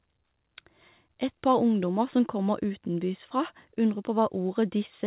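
Nothing goes wrong anywhere in this one, and the only thing of note is the narrowband call sound, with nothing above 4 kHz, which fits a G.711 A-law phone-style link.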